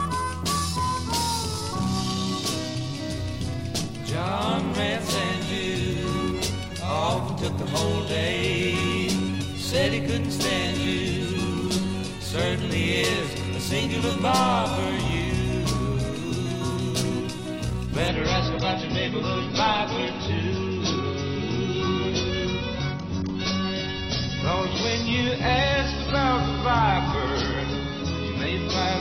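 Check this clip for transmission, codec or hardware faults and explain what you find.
One fault: the clip switches to an adaptive stream at a lower bitrate at 18.08 s and stays there to the end. The connection slowed, so the player moved to a leaner encoding of the same audio, which fits a step from about 96 kbit/s down to 24 kbit/s AAC. There is no gap. The quality simply changes at once: coding artefacts rise, and the treble is lost, with nothing above 6 kHz for the rest of the clip.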